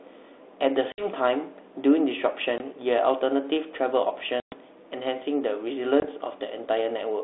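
Speech on a G.726 ADPCM line at what sounds like 32 kbit/s, band-limited to about 300 Hz–3.6 kHz, breaks four times with packet loss on an ADPCM call: 0.92–1.07 s (60 ms gone), 2.58–2.61 s (20 ms), 4.40–4.53 s (120 ms) and 6.00–6.07 s (20 ms). Each hole is hard-edged silence. Afterwards the decoder's predictor and step size no longer match the sender's, so speech resumes with brief, slight distortion before settling.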